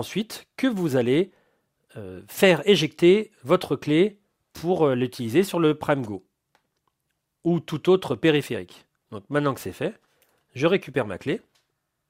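Nothing goes wrong anywhere in this recording; there's no technical fault to point to at any moment.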